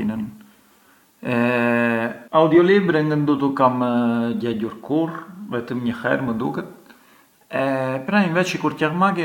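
At 2.28 s a CD skip: the laser jumped tracks, muting for a few milliseconds, heard as a tick and abrupt jump, a thin vertical broadband stripe on a spectrogram.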